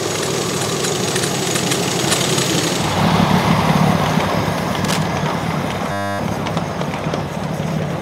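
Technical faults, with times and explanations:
4.84 to 5.03 s, cable scratch noise: a quick burst of scratchy, rustling noise nearly as loud as the sound, likely a worn cable or connector being jostled.
5.92 to 6.19 s, system hang loop: a 10 ms slice repeats over and over, giving a steady 100 Hz buzz while roughly a third of a second of audio goes missing.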